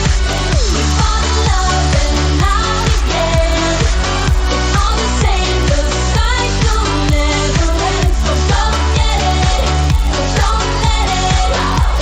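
From start to finish, the resampler restarted on every block. Each 10 ms block was converted without its neighbours, so every boundary carries a small error. At that spacing the ticks merge into a 100 Hz buzz that sits under the signal, in what was a 16 kHz to 48 kHz conversion.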